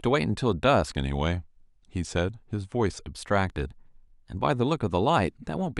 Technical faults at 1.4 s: drift correction step

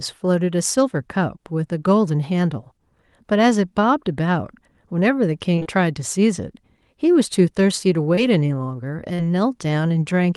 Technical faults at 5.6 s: short concealed packet loss

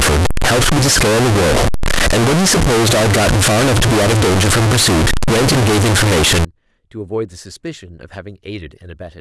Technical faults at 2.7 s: float read as integer

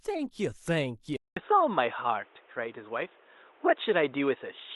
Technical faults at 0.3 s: none

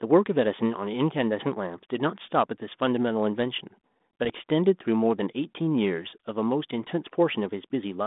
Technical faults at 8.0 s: none

